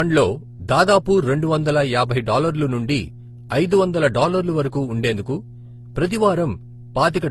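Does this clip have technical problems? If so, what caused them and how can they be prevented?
Yes. A steady low buzz at 60 Hz runs under the speech for the whole clip, about 20 dB below it. This mains hum comes from a ground loop or a nearby transformer leaking the power line into the signal. Power all gear from one outlet, use balanced cables, and keep audio lines away from transformers.

The speech also carries a mix of different codec artefacts heard together throughout, with nothing above 20 kHz. The likely cause is transcoding between lossy codecs, with the sound pointing to HE-AAC, then AAC-LC, then Opus, each re-encoding the previous codec's damage. Keep a lossless master and encode to the final format only once.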